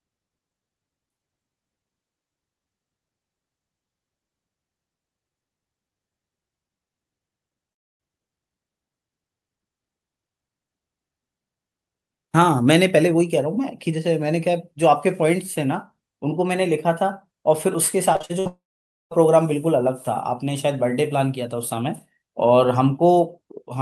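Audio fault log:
18.13–18.47 s, repeated packet loss (robotic sound): five short gaps, longest 57 ms, each patched by extending the preceding speech, so nearly half this stretch sounds choppy and robotic.
18.47–19.13 s, likely a long network dropout: speech stops, the last sound is briefly stretched into a fading buzz or hiss, then about 0.5 s of silence follows before speech resumes with that portion missing.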